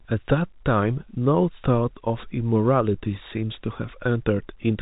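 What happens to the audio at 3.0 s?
Nothing goes wrong at 3.0 s: the speech carries on intact through that moment, with only the narrow telephone band of G.711 coding, which lets nothing above 4 kHz through.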